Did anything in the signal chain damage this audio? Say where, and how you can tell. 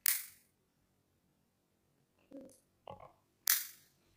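Yes. The damage happened at sample-format conversion, and it runs the whole length of the clip. Everything sounds an octave high, with a steady flutter at about 23.4 Hz. That is the signature of planar audio read as interleaved. Each block of about 42.7 ms, which fits a 2048-sample block, holds one channel's run and then the other's. Read as alternating pairs, each half plays at double speed. So the pitch doubles while the overall pace holds.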